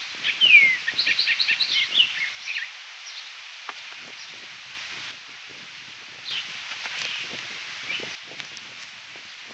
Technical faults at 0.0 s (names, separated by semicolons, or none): none